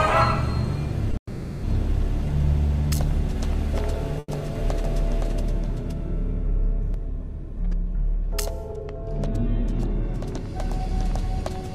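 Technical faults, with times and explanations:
1.11–1.15 s and 4.19–4.30 s, short stall from a late packet: In each case a packet arrived late and the receiver's buffer ran dry. The last sound was held out to fill the wait, for 20 ms at 1.11 s and 90 ms at 4.19 s, and the audio then resumed from the same point with nothing lost. On a spectrogram the spectral pattern freezes into flat horizontal bands. The waveform shows a repeating, slightly smoothed cycle.
1.17–1.65 s, call audio freeze: Almost immediately after the first stall, the audio stops moving for 460 ms. It is most likely held-up packets that emptied the jitter buffer. The receiver first extends the last sound as a fading buzz, which then falls to about 90 ms of silence before the stream picks up where it left off. The spectrogram shows smeared, decaying bands narrowing to a blank strip. Everything after this point is pushed later by almost half a second.
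4.84–6.94 s, doubled audio track: A second full-band copy of the audio runs about half a second behind the original and about 5 dB quieter. It likely comes from the sound being captured again through a slower path. The copy has no room colour or decay tail, and it appears and disappears abruptly at each end of the span. On a spectrogram every feature in this span is repeated at the same offset. The waveform shows overlapping envelopes that start and end with hard edges.
9.65–11.43 s, jitter buffer speed-up: The receiver had built up more buffered audio than it aims to hold, so it trimmed the excess by cutting out many tiny pitch-period slices, about 50 ms in total. Playback runs at 102% of normal speed with the pitch unchanged. On the spectrogram, the harmonic lines keep their height while events sit a little closer together. The waveform shows small seams where cycles were removed.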